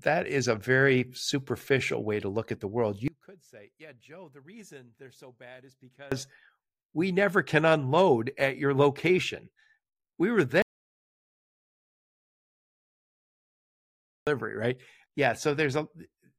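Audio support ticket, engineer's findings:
Speech collapses 3.08–6.12 s, level down about 26 dB, leaving only a faint residue. Likely one channel inverted: opposite-polarity channels cancel their common centre content in the mono sum. Unlike a dropout, something faint remains, and unlike a gain fault, only the small mismatch between channels survives.

Audio dropout to silence at 10.62–14.27 s. Sound cuts off mid-flow for 3.65 s, then returns. Likely input loss (link, device or mute) while the recorder kept writing silence. Unlike the polarity cancellation, the gap is silent with no residue and no room tone.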